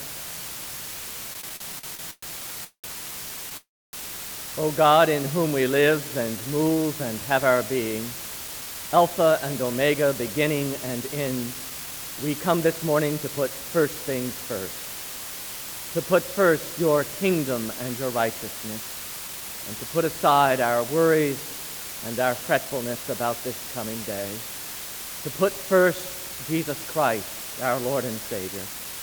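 A constant, even hiss sits under the whole clip, roughly 10 dB below the signal. This is low bit depth with dither, which fits about 5-bit quantisation: dither turns the rounding error into steady white noise with no distortion. On a spectrogram it appears as a uniform grey wash across all frequencies, and the waveform's quiet stretches never fall to a flat line.

From 1.33 to 3.54 s the sound drags and stutters. These are repeated stalls (stutter): the receive buffer kept running dry, and each time the last sound was stretched out until audio resumed. There are ten such fills totalling 496 ms, the longest 193 ms, and they make up 22% of the span. They appear as smeared, repeated patches in the spectrogram.

From 3.57 to 3.96 s comes a call audio freeze. The last sound is held and fades into 290 ms of silence, adding 360 ms of delay before playback resumes where it stopped. The likely cause is packets held up in transit. 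On the waveform this shows as a decaying tail followed by a flat gap, and on the spectrogram as a dark vertical band.

Between 5.39 and 6.83 s a jitter buffer slow-down plays the audio at 90% speed while keeping its pitch. Single pitch periods were repeated to rebuild the reserve, adding 160 ms. The spectrogram shows features stretched sideways, with harmonics unchanged in height.

A jitter buffer speed-up runs from 8.47 to 13.78 s at 108% speed, removing about 400 ms by cutting short pitch-period pieces. This shortens an excess delay and makes the sound hurried. Shorter speed-ups follow at 22.60–23.04 s (112%), 26.29–26.81 s (110%) and 28.48–28.98 s (114%), each removing about 70 ms. They show as compressed spectrogram patterns at unchanged pitch.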